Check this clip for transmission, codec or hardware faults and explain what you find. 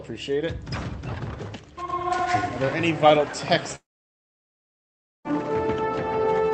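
There is one fault: a long network dropout from 3.75 s to 5.27 s. The sound breaks off and the last moment smears into a short fading buzz. Within a fraction of a second only silence remains, lasting about 1.4 s. The sound then resumes, with roughly 1.5 s of material gone. The likely cause is a stall in packet delivery. The receiver briefly concealed the gap, then gave up. The call codec path, whose top end stops near 8 kHz, is not at fault.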